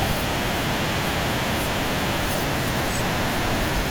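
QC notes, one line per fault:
2.41–2.44 s, compressed frames skipped: compressed frames are absent or were rejected as damaged by the decoder, so the speech jumps ahead by about a tenth of a second.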